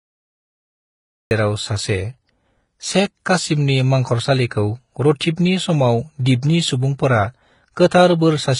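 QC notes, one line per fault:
Throughout, transcoding between lossy codecs: the speech was likely encoded with one low-bitrate codec and then re-encoded with another. The smeared, swirly quality of the first pass fits HE-AAC at around 20 kbit/s, and the tonal warbling of the second fits Vorbis at around 35 kbit/s. The second encoder spent its bits preserving the earlier damage while adding its own, so both kinds of artefact sit together, and nothing survives above 10.6 kHz, leaving the speech dull.
0.0–1.31 s, cut-off start: the recording or stream began late, so the opening is digital silence and the speech enters abruptly at 1.31 s, already partway through a sound. Because capture began mid-utterance, that first sound has no natural onset or fade-in. Its start is missing, and the speech seems to switch on rather than build up.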